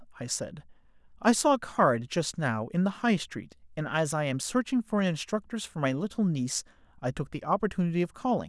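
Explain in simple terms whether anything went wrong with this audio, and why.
Nothing went wrong; this recording has no technical problems.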